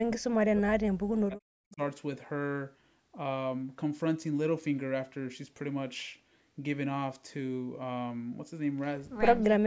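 From 0.0 to 0.66 s and 1.15 to 1.8 s the speech sinks by roughly 40 dB, likely speech suppressed in double talk.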